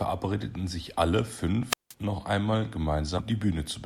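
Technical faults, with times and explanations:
1.68 to 1.94 s, wireless microphone squelch dropout: the radio link from an analogue FM microphone weakened until the receiver's squelch cut the output. The fading carrier first lets hiss and static rise, then the receiver mutes for about 175 ms, leaving a hole of near silence in the speech before the signal recovers and the voice returns. The sequence of noise, then gating, then recovery is what marks this as squelch rather than a simple edit.
3.17 to 3.20 s, compressed frames skipped: a block of compressed audio was never played, either missing from the stream or rejected by the decoder as corrupt. The speech jumps forward by roughly 150 ms, which fits around seven frames of about 20 ms each. The join lasts about 23 ms, and the lost section is simply absent.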